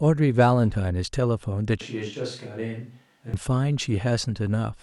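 A switch to a distant microphone runs from 1.81 to 3.34 s. The speech abruptly turns roomy and hollow, loses bass, drops by roughly 10 dB and gains faint room noise, then snaps back. The likely cause is that the close microphone's signal failed and a farther one took over.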